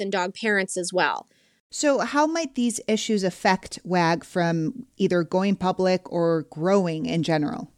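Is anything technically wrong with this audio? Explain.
No, nothing in this speech recording points to a technical fault.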